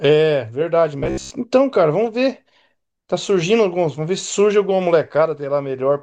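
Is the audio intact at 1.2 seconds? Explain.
No. From 0.99 to 1.31 s there is robotic sound from repeated short buffers: a rigid, metallic buzz near 67 Hz, likely from roughly 15 ms chunks being replayed while most of the real audio is skipped. The waveform shows identical repeating cycles, and the spectrogram shows flat, evenly spaced harmonic lines.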